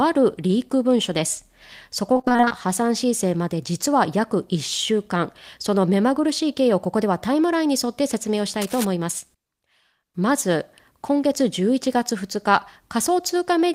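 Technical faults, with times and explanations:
2.13 to 2.52 s, repeated packet loss (robotic sound): over this stretch the stream breaks up about ten times, the longest gap only about 22 ms, and roughly half of the span is patched by extending the sound that came just before each hole. The quick succession of short repeats gives a choppy, robotic texture. It sits on the speech itself, which separates it from a single dropout or from noise added over the top.
8.61 to 8.85 s, cable scratch noise: for about a quarter of a second a dense, uneven burst of scratching and rustling rides over the speech at around 10 dB below it. The likely cause is a worn cable, connector or control being moved, so that its contact resistance jumps about rapidly. The noise is added over the speech rather than leaving pieces missing, and that is what tells this apart from packet loss.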